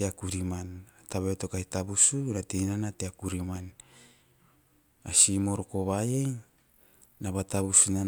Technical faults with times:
none

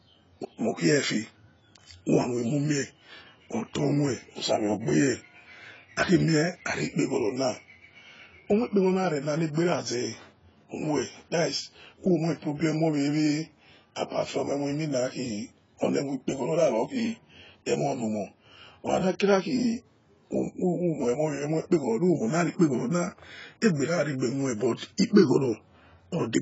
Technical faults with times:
0.00-26.41 AAC compression
24.76-24.81 pre-echo

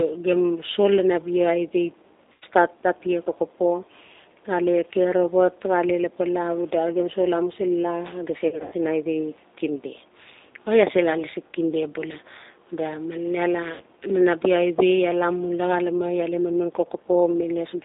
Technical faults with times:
0.00-17.85 G.729 codec
2.32-2.44 VoIP packet loss concealed by the speech codec
8.48-8.75 VoIP packet loss concealed by the speech codec
13.74-13.81 VoIP packet loss concealed by the speech codec

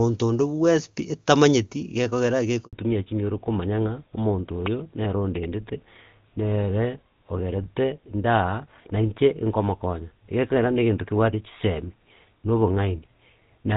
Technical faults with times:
2.65-2.73 handover gap
2.73-13.77 fallback to narrowband

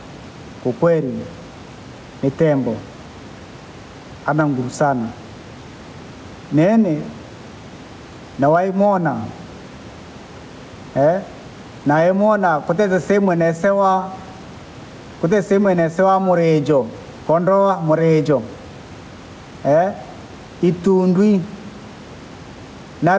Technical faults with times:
0.00-23.19 gain pumping

